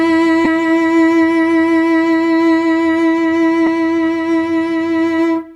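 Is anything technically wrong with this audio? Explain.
Yes. Bluetooth LE Audio frames were lost twice in this music, at 0.45 to 0.47 s and at 3.66 s. About 15 ms went missing at the first point, which fits two 7.5 ms frames, and about 7.5 ms at the second, which fits one. Each time the LC3 decoder filled the gap by reusing the last spectrum with randomised signs. The tonal content briefly turns into a short noisy smear instead of dropping out. The light lossy compression present leaves no obvious trace.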